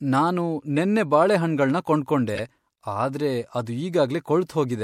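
Corrupt frame decoded at 2.35 to 2.39 s: damaged compressed frames were played anyway, misplacing energy across several frames and producing a brief, fairly loud glitch in the speech.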